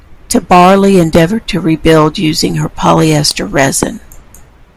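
A sharp loud pop jumps well above the speech at 1.15–1.17 s, just before "to rebuild her using", and a stronger one, roughly 20 dB over the signal, at 3.83–3.85 s, right after "rebuild her using polyester". Both are likely brief voltage spikes from a switch, plug or static discharge.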